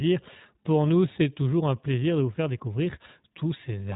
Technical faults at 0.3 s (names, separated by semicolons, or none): iLBC codec